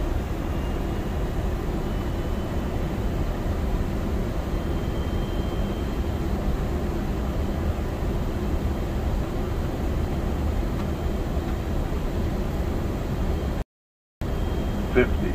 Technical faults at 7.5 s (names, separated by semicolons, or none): none